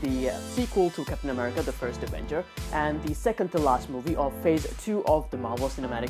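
No technical faults can be heard anywhere in this audio.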